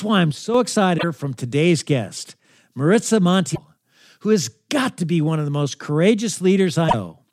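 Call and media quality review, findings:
Speech level abruptly sags by about 6 dB from 0.32 to 0.54 s, then recovers. Likely one channel drops out upstream of the mono downmix, so only half the shared signal reaches the sum for that stretch.

Short decoding glitches at 0.95–1.04 s, 3.52–3.58 s and 6.85–6.94 s. Damaged data in a compressed stream: corrupted frames garble the decoder output, which loses sync and resumes at the next valid frame header, leaving a brief blip.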